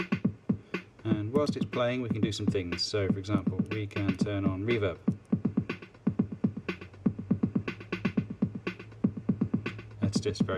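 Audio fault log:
No faults detected anywhere in the clip.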